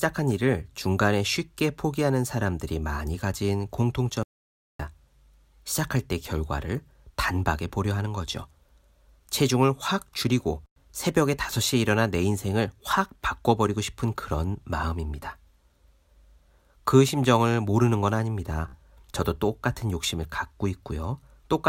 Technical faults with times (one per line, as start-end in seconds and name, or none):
4.23-4.79 audio dropout to silence
18.68-18.75 Bluetooth stutter